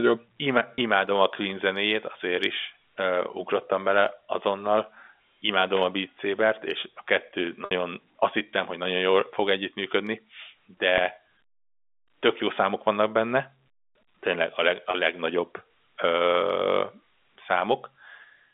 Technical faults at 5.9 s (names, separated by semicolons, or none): none